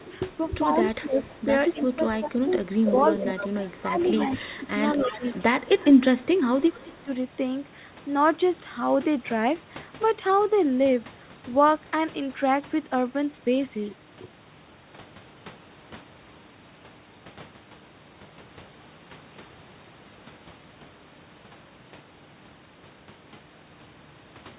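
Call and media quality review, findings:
Echo leak: delayed copy at 0.03–0.11 s (205 ms, about 20 dB down), 2.65–5.42 s (262 ms, about 10 dB down), 6.72–7.03 s (208 ms, about 25 dB down). Likely far-end speakerphone AEC letting residual through.

Speech suppressed in double talk: near talker ducks at 0.76–3.37 s (about 15 dB), 3.73–4.66 s (about 15 dB), 4.97–5.24 s (about 10 dB), 5.75–7.1 s (about 25 dB). Likely AEC clamping its own talker along with the echo during overlap.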